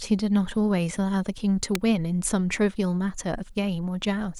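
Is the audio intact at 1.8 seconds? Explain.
No, right around there at 1.75 s there's an electrical switching spike, a sharp snap peaking near -10 dBFS, likely from a nearby switch arcing into the line.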